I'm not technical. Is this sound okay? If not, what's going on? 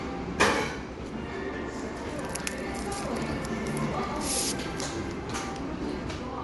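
No, not quite. All the way through, the sound has a grainy, hissy edge and nothing above 11.5 kHz, so it sounds dull on top. That's likely Bluetooth LC3 compression, which squeezes the audio in 10 ms chunks and fakes the highs with noise.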